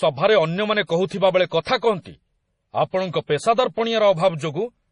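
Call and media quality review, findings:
Likely MP3 compression at a very low bitrate, consistent with about 32 kbps: encoder starving the treble band and dropping weak lines. Throughout the speech: hard band limit, nothing above 10.5 kHz, heavy watery, swirly texture, metallic sibilants, blurred consonant edges.

Pre-echo from the transform codec's block-wide quantisation noise landing before sharp onsets. Brief hiss ahead of attacks at 0.87–0.89 s (25 ms spread), 1.06–1.11 s (44 ms), 1.49–1.51 s (21 ms); those onsets sound softened and smeared.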